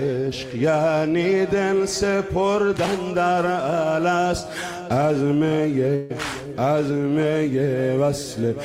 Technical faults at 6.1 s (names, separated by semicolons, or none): burst of packet loss